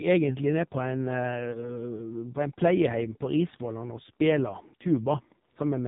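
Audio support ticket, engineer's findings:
Whole clip: buzzy, synthetic-sounding speech with nothing above 4 kHz, dull and boxy. Component: AMR narrowband mobile codec (AMR-NB). Mechanism: 8 kHz sampling plus a vocal-tract model driven by sparse pulses. Damage heavy, with coarse and brittle detail, which fits the low 5.9 kbps mode.

1.52 to 1.83 s: brief dip and warble, then speech returning weak and rough. Component: lost AMR speech frames. Mechanism: the decoder re-used the last good pitch and vocal-tract settings at falling gain. The sound points to a single lost 20 ms frame.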